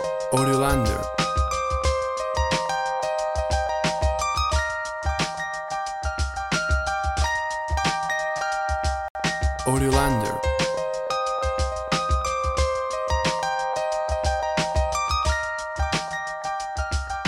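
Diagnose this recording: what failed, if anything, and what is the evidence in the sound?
A 67 ms gap cuts continuous sound at 9.08–9.15 s, then resumes where it stopped: a gap at a join of encoded pieces, where untrimmed codec delay and end padding remain.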